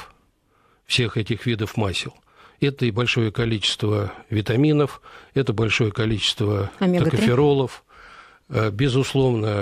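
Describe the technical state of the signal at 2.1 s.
At 2.1 s the signal is intact, with no dropout, distortion or other technical fault audible at that point.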